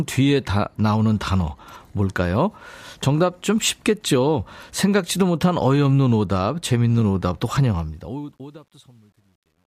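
Speech clip with truncation distortion on its closing fade-out, which starts around 7.62 s and ends at 9.76 s. From 7.62 s the tail turns grainy. Between 8.4 and 9.76 s it is at its worst as the waveform collapses onto a few coarse steps, which fits an undithered 10-bit stage. Unlike a noise gate's chatter, the grit grows steadily as the level falls, with no hiss masking it.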